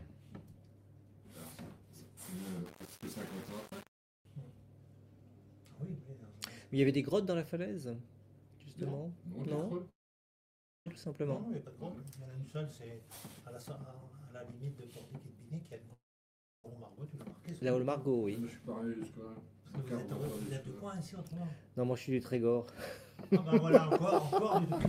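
From 2.66 to 4.25 s the sound turns grainy. The likely cause is low bit depth without dither, here about 7 bits with rounding, giving error roughly 20 dB below the signal. Unlike steady dithered hiss, this grit tracks the signal and thickens on quieter passages.

At 9.89 s a long network dropout likely begins. After a brief fading continuation, about 0.92 s of silence follows, and playback resumes at 10.88 s with about 0.6 s of material missing. That skipped material is what distinguishes it from a plain mute.

From 10.95 to 14.00 s a jitter buffer speed-up plays the audio at about 112% while keeping the same pitch, which distinguishes it from a resampling error. Trimming short pitch-period pieces removes roughly 0.4 s, and the passage sounds hurried.

A second likely dropout runs from 15.93 to 16.68 s, with about 0.64 s of silence and about 0.6 s lost. A second speed-up follows from 16.76 to 17.70 s at about 111%, removing roughly 0.1 s.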